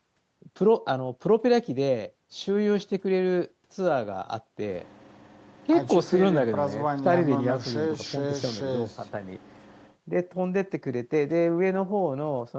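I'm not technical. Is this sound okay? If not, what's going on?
Yes, nothing here is faulty; the speech has the slightly narrow sound of an ordinary internet call, with nothing above about 8 kHz, which is normal for this kind of call.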